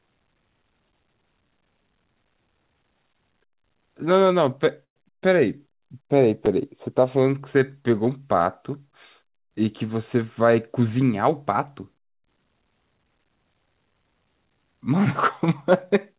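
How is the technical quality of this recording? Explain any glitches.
The recording has two short glitches, both in the speech playback path. It is band-limited, with nothing above 4 kHz, which fits narrowband telephone-style coding such as G.711 A-law.

At 4.84 s there is a call audio freeze lasting until about 4.98 s. The last sound carries on briefly as a decaying buzz, then drops to near silence for about 100 ms before speech resumes. The likely cause is packets stalling in transit so the jitter buffer ran dry and the receiver filled the gap, 119 ms in all. No speech is lost. The audio resumes where it stopped, now running 119 ms later.

At 6.46 s there is a repeated buffer. A very short slice of audio is played two extra times back to back, with hard joins at each repeat. Each piece lasts about 5.3 ms, which fits a 256-sample buffer. The device had no fresh audio in time, so it replayed the previous one. 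At this size the repeats don't register as a stutter. They come across as a brief click or tiny buzz.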